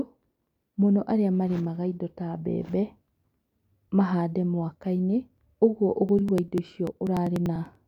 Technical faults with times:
6.09-7.75 periodic USB or driver dropouts

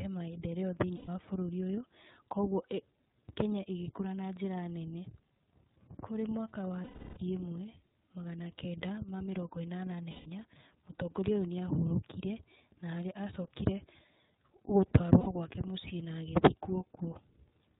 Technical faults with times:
0.00-17.80 iLBC codec
0.96-1.08 lost iLBC frames
6.84-7.18 lost iLBC frames
10.11-10.27 lost iLBC frames
15.21-15.27 lost iLBC frames

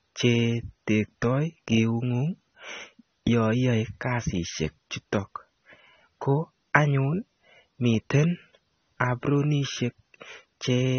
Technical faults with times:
0.00-10.99 AAC compression

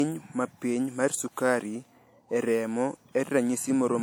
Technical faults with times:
0.00-4.03 low-bitrate audio saved at a high bitrate

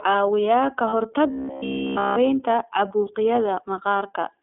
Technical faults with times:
0.00-4.42 iLBC codec
0.89-0.94 lost iLBC frames
1.31-2.18 robotic sound from repeated short buffers
2.88-2.91 lost iLBC frames

